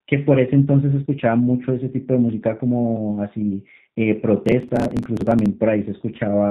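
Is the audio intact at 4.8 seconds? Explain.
No. Processor overload crackle runs from 4.46 to 5.46 s. Many short audio buffers, around 10 ms each, miss their deadlines and are skipped. Dozens of hard-edged gaps make a gritty crackle. Underneath, G.729 codec damage is plainly audible throughout. The speech sounds rough and synthetic, and its narrow band fits an 8 kbit/s G.729A stream.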